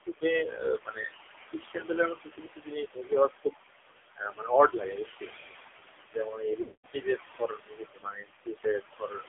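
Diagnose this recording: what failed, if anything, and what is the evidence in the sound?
In the call-processing stage, the noise suppressor is gating the room noise, which sits only about 5 dB below the speech, by about 18 dB. The result is noise suppressor artifacts: the background pumps down in gaps and back up under speech.

The codec stage is AMR narrowband at heavy damage, with a sound that points to a low mode around 5.9 kbps. Everything outside roughly 300 Hz to 3.5 kHz is gone. The excitation model, starved of bits, makes the speech buzzy and synthetic and turns residual noise into a swirl.

Speech cut by the noise suppressor occurs at 0.02–0.24, 0.44–1.15, 3.29–3.54, 4.16–4.51, 4.69–5.48, 6.09–7.18 and 7.39–9.28 s. The suppressor misclassified low-level speech as noise and attenuated it by up to about 22 dB, so consonants and endings sound swallowed, most extensively in the last two seconds.

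On the network or radio side, lost AMR speech frames occur from 6.62 to 6.86 s, a 220 ms run that fits about eleven 20 ms frames. The decoder concealed them by repeating the last good parameters with falling gain, so the sound smears, fades to silence, then returns rough.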